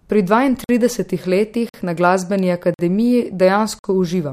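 Gaps between chunks cut the speech at 0.64, 1.69 (just before "na glasbeni"), 2.74 (just after it) and 3.79 s: 50 ms holes, one per 1 s chunk.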